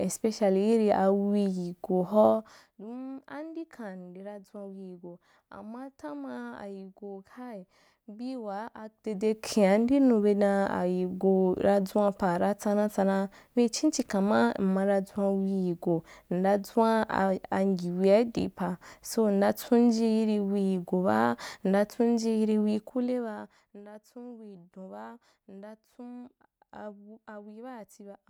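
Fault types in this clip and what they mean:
Zipper noise: the gain is moved in discrete jumps rather than a continuous ramp, and each jump leaves a small click. Here it is heard three times as a rapid ticking of roughly 40 steps per second, riding on the speech. From 2.25 to 2.62 s, the level drops by around 15 dB in 1 dB steps. From 8.89 to 9.40 s, just after "bii waa", it rises by around 15 dB. From 22.62 to 23.8 s, it falls by around 20 dB in finer steps.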